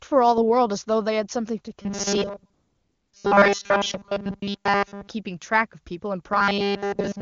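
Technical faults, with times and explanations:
1.82–5.08 s and 6.32–7.21 s: robotic sound from repeated short buffers. The speech becomes a rigid metallic buzz at 200 Hz. Most of it is replaced, likely by a repeated 5 ms buffer while real audio is skipped.
2.53–3.13 s: AMR comfort noise. For 0.6 s the real background gives way to smooth, steady synthetic noise, because no speech frames arrived and the receiver filled the gap.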